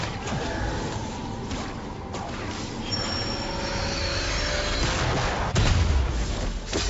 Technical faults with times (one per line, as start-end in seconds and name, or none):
none